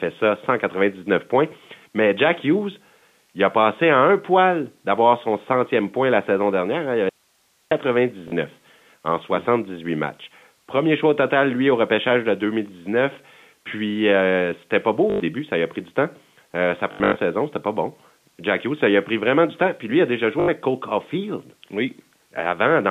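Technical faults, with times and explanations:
7.09–7.71 s, audio dropout to a faint residue: the speech cuts abruptly to hiss about 45 dB down for 0.62 s, likely a lost signal with the path still live.
8.28 s, 15.1–15.2 s after "euh c'était pas beau", 16.92–17.16 s before "saison c'était pas bon", and 20.4–20.48 s after "lui a déjà joué", packet loss with last packet repeated: the receiver replays the last packet, so runs up to 100 ms buzz at 50 Hz, which fits 20 ms packets, all within the narrow G.711 telephone band.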